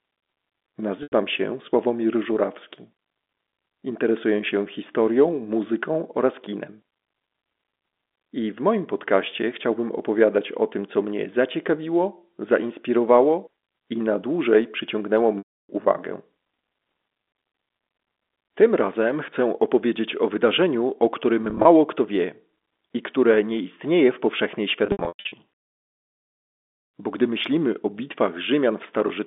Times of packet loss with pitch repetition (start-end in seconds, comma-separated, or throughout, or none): 1.03-1.12, 15.38-15.69, 21.45-21.65, 24.86-25.32